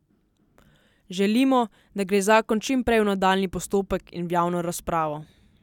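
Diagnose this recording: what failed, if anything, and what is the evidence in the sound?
Nothing failed; no faults found.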